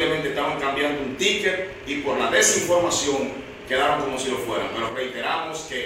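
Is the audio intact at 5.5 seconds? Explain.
No. From 4.89 s to the end, the sound drops abruptly by about 6 dB and stays there, likely from one channel dropping out before the mono sum. Unlike a fade or gain change, the step is instant, and anything carried only by that channel disappears.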